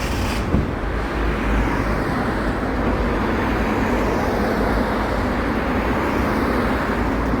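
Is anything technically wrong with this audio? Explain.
Yes. Adaptive stream at a lower bitrate, from 1.23 s to the end: the stream abruptly swaps to a lower-quality version, with the change fitting a drop from about 64 to 24 kbit/s Opus. With no gap, codec artefacts become more noticeable.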